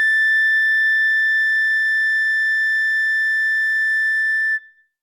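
Music clip; no technical faults to report.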